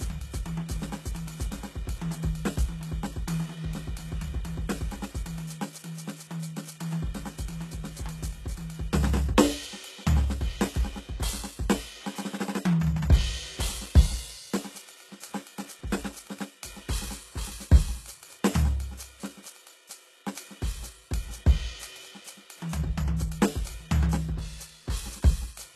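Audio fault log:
throughout, HE-AAC compression: the music goes dead above 12.3 kHz, and the treble beneath that sounds rebuilt rather than real, gritty and metallic, with highs that don't sit with the lower harmonics. It's likely HE-AAC band replication, and the damage points to roughly 16 kbps.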